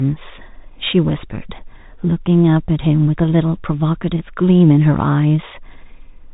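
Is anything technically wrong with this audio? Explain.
Yes, the whole clip has gone through a Bluetooth CVSD headset codec, and the damage is plainly audible from start to finish. CVSD encodes each sample as a single up-or-down bit with an adaptive step, which fits a 64 kbps headset link, and as a narrowband codec it passes nothing above 4 kHz. The speech sounds narrow and boxed-in, loud bright moments distort where the step can't keep up, s sounds turn scratchy, and there's a granular hiss underneath.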